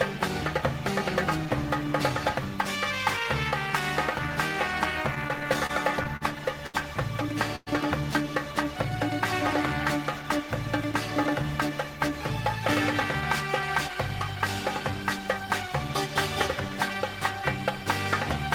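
From 5.15 to 6.23 s the sound drags and hiccups in seven brief holds, the longest about 41 ms and about 119 ms in all. These repeated stalls (stutter) come from packets arriving late, draining the jitter buffer repeatedly while the receiver extended the last sound each time.

At 6.67 to 6.76 s a sound is held too long for about 71 ms, with a faint buzz or dip. This short stall from a late packet happened when the jitter buffer emptied and the receiver stretched the last sound until the delayed packet arrived, then resumed without losing anything.

From 7.56 to 7.69 s the sound briefly freezes into a buzzing or hissing hold of about 108 ms before carrying on from the same point, with no silence. This call audio freeze was likely caused by packets held up in transit, leaving the jitter buffer empty while the receiver filled the gap.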